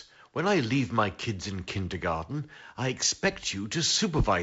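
No technical faults can be heard anywhere in the speech. The G.722 wideband telephone coding at 48 kbit/s leaves nothing above about 7.7 kHz and adds a light graininess in both bands, as expected at that rate.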